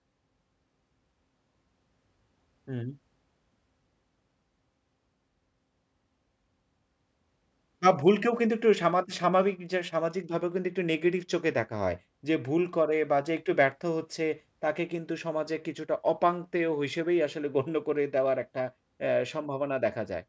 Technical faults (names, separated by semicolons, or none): none